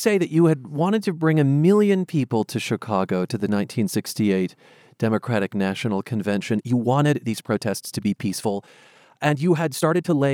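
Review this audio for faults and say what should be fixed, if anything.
From 6.48 s to the end, the speech suddenly runs about 1.41 times faster while its pitch stays put, and the sped-up part sounds rushed. This is a time-stretched section, likely made when software squeezed the audio to fit a shorter length by dropping short slices while keeping pitch. A simple speed-up or resampling error would raise the pitch along with the tempo. Here only the pace jumps. To prevent it, edit content to length or adjust timing between phrases instead of compressing the audio.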